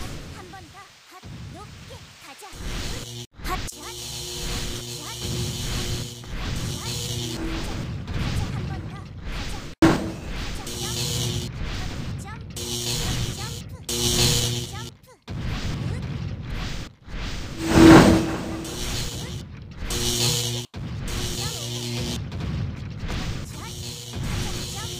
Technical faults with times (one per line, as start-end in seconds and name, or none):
9.82 damaged data in a compressed stream